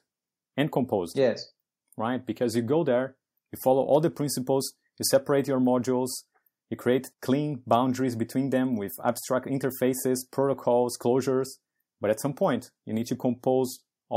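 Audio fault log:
No faults are heard in this speech recording. Nothing in it calls for an entry in this log.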